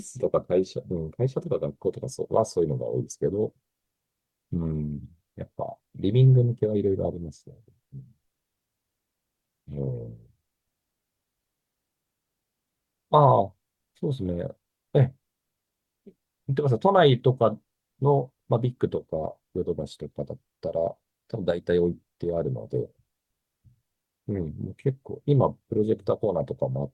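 Nothing goes wrong anywhere in this bit of speech, so there's no fault to point to at any moment.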